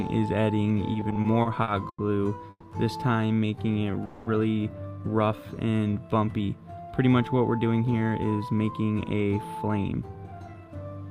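From 0.93 to 2.00 s there are repeated stalls (stutter): eight short gaps, the longest 90 ms, filled with continued sound totalling 230 ms, as late packets repeatedly emptied the jitter buffer.

At 2.50 to 2.65 s a call audio freeze stretches the last sound for 130 ms, fading to about 40 ms of silence. At 4.05 to 4.28 s a second freeze holds a 210 ms continuation without silence. Both are likely delayed packets.

Jitter buffer slow-down runs from 3.28 to 3.92 s at 86% speed, adding 99 ms, and from 5.29 to 5.77 s at 89%, adding 60 ms. Repeated pitch periods drag the sound at unchanged pitch.

From 7.58 to 10.75 s, jitter buffer speed-up trims short pitch-period pieces to reduce the buffered delay. The audio runs at 111% speed and sounds hurried, losing roughly 0.4 s.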